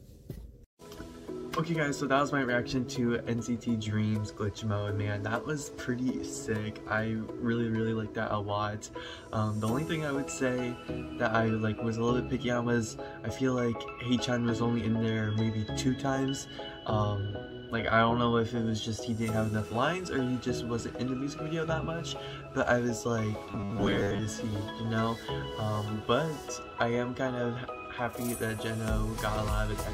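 Robotic sound from repeated short buffers appears from 23.47 to 24.20 s. For about three quarters of a second the audio turns into a rigid, metallic buzz at 100 Hz that only loosely follows the underlying sound. The likely cause is new audio arriving too seldom, so the playback fills the gaps by looping a 10 ms stretch. Roughly half of this span is repeated material, and the real audio in those moments is skipped.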